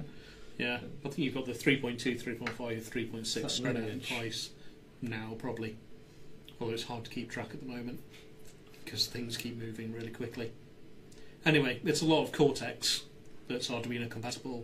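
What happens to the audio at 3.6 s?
Compressed frames are skipped between 3.53 and 3.59 s. A run of whole frames in the compressed stream never reaches the output, either because they are absent from the file or because the decoder rejected them as damaged, so playback jumps forward by around 50 ms of audio. At the join, the sound lurches ahead.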